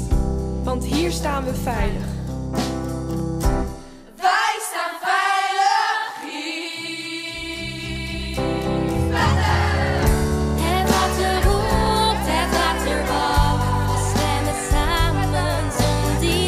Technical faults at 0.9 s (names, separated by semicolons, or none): none